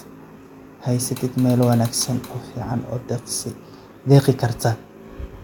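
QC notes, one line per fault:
No faults detected in this speech clip.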